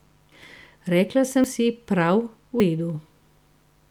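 A steady mains buzz runs under the speech for the whole clip, roughly 40 dB below it: switching spikes twice per 50 Hz cycle leave a raspy tone, seen on a spectrogram as evenly spaced horizontal lines at 50 Hz harmonics climbing into the kilohertz range.

At 0.32 s, 1.44 s and 2.6 s the sound jumps forward, most likely a dropped buffer (overrun): samples were overwritten before being read, and the two sides were spliced together with no gap. Each loses a few tens of milliseconds, the last one longer. The waveform shows a sudden discontinuity and the spectrogram a thin vertical broadband stripe.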